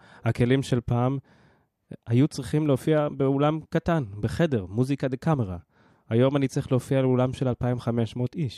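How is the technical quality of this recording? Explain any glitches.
The speech signal runs continuously, with no glitches or technical faults anywhere in the recording.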